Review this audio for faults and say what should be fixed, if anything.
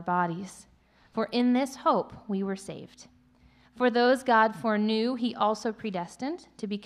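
Nothing stood out on listening, so there is nothing here that needs fixing.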